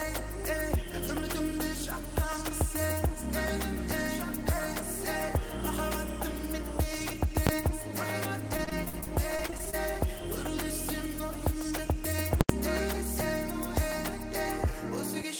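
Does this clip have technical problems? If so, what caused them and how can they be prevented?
Yes, there are two kinds of fault here.

Invalid numbers at full scale show up twice. At 7.47 s there's a single sharp bang lasting about 21 ms, which fits a 1024-sample processing block. At 12.41 to 12.49 s it's longer, about 85 ms, consistent with a 4096-sample block, so you get a hard pop going in and coming out with dead, pinned silence between. In both cases some calculation blew up into infinite or invalid values, and those got clamped to the maximum sample value for the whole block. To prevent it, check for NaN and infinity after each DSP stage and reset or mute the block instead of passing the garbage through.

Repeated packet loss (robotic sound) runs from 8.57 to 9.75 s. Over that second or so the stream keeps dropping out in short holes, the longest about 46 ms. Roughly a fifth of the stretch is patched-over sound rather than real audio. 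The concealment keeps stretching the last bit it received, and the next hole hits before things recover, so it comes out choppy with chunks missing. To prevent it, use a larger adaptive jitter buffer and a more reliable network path, and add forward error correction so isolated losses can be rebuilt.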